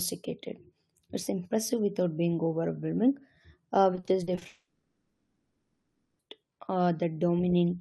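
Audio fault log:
3.95–4.43 s, repeated packet loss (robotic sound): six gaps up to 40 ms, a third of the span, each filled by extending prior audio, sounding choppy and robotic.
4.47–6.21 s, long network dropout: sound becomes a fading concealment buzz, then 0.65 s of silence before resuming with material missing, likely from packets ceasing to arrive.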